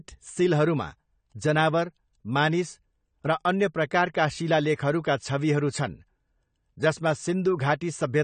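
Speech, and the whole thing carries audible AAC compression damage from start to finish. The top end is dulled where the encoder has lowered its cut-off, sibilants come out fizzy and smeared, and sustained vowels have that watery warble you get when bands are thinned out or patched with substitute noise. It's likely low-bitrate AAC-LC encoding, and the degree of damage fits something around 32 kbps.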